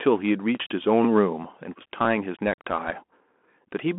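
Throughout, a Bluetooth CVSD headset codec confines the speech to 200 Hz–3.4 kHz, with nothing above 3.8 kHz. Its one-bit delta coding, which fits 64 kbps, leaves plainly audible grain.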